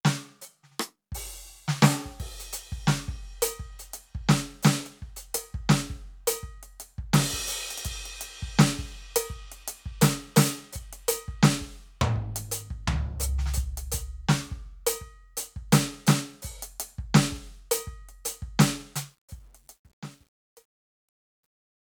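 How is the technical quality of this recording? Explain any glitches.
The recording has one clear glitch, truncation distortion on the fade at the end of this music.

From 18.99 s to the end at 21.94 s, the fade-out is affected. As the level drops, the gain stage keeps too few bits and adds no dither, which fits a 10-bit path. From 19.54 s onward the tail turns gritty. On a waveform the decaying signal becomes a few square steps. A spectrogram shows broadband hash in place of a clean taper.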